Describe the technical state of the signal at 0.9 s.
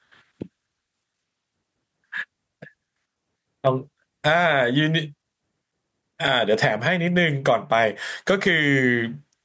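At 0.9 s the speech shows gain pumping, which runs through the whole clip: loud and soft parts are pulled closer in level, with a swing of around 15 dB. This is likely an input gain set far too high, with a fast limiter clamping it on each peak. On a waveform the envelope looks flattened and squashed.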